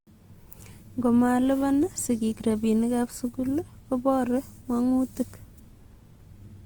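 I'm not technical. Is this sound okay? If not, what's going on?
No. All the way through, the speech has a rough, grainy, hissy texture, as if the sound were made of fine sand. That points most likely to Opus compression, a way of shrinking audio files. When the file is squeezed hard, the encoder fills in missing detail with borrowed or noisy sound. Unlike MP3 damage, it swirls less, and the clip still reaches the highest treble, so it isn't muffled.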